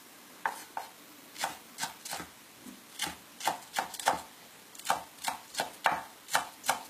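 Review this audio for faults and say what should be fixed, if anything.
Low-bitrate audio saved at a high bitrate, throughout: the sounds carry the smeared, band-limited artefacts of a very low-rate HE-AAC encode, likely re-saved as high-rate MP3. Prevent this by encoding from the original uncompressed source rather than from an already compressed copy.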